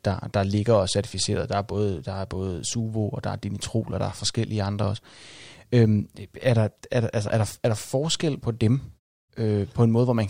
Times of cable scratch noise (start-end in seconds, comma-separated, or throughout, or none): none